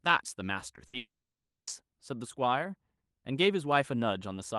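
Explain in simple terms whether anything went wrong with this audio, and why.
Short concealed packet loss at 0.75 to 0.79 s: a few hundredths of a second never arrived, so the receiver briefly stretched the previous sound, leaving a small smear.

Burst of packet loss at 0.87 to 0.95 s: several packets in a row went missing, so the last sound was held and faded for about 60 ms, and that part of the audio is gone.

Long network dropout from 0.97 to 1.69 s: the sound trails off as a brief fading continuation, then about 0.6 s of silence follows. This was likely caused by no audio getting through the network for that stretch. When the sound returns, the lost part is missing.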